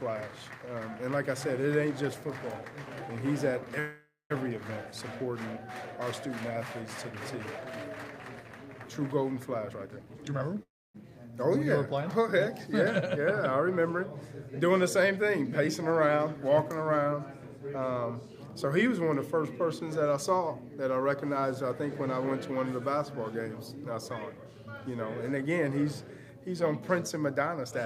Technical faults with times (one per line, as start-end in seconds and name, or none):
3.79-4.32 call audio freeze
9.58-10.56 jitter buffer speed-up
10.63-10.96 call audio freeze
27.35-27.85 jitter buffer speed-up